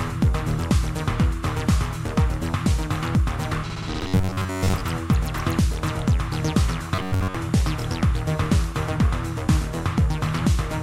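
Robotic sound from repeated short buffers affects the audio at 4.01 to 4.81 s and 6.95 to 7.35 s: a rigid 93.8 Hz buzz replaces most of the sound, likely from a roughly 10.7 ms block replayed while fresh audio arrives late. Unlike silent dropouts, the sound continues at a fixed rate.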